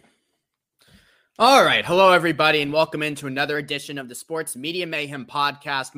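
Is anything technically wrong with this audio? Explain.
Yes. From 3.56 to 4.96 s, just after "and welcome into another", there is a drift correction step. The likely cause is clock-matching software that abruptly raised the playback rate by about 5.5% to rebalance its buffer, then dropped it back. Speed and pitch rise together, so the speech briefly runs faster and sits about 93 cents sharp, close to a semitone, before snapping back to its normal rate and pitch.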